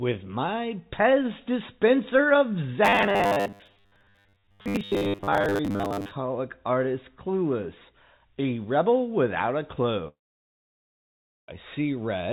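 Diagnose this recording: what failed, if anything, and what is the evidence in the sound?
Buffer stage, 2.85 to 6.11 s: robotic sound, a fixed 100 Hz buzz, likely from repeated 10 ms buffers. Unlike a dropout, the sound never stops.

Network, 10.08 to 11.50 s: likely a long network dropout. A brief fading fill gives way to 1.33 s of silence, and 1.4 s of audio is lost, unlike the earlier steady buzz.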